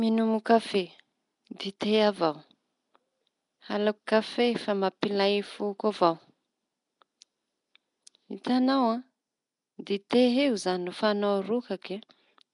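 From start to finish the speech has a rough, hissy halo and a smeared, underwater quality, with nothing above 10.6 kHz. This is Nellymoser compression, likely from Flash's microphone codec, which fills unfunded bands with noise at a rate near 44 kbps.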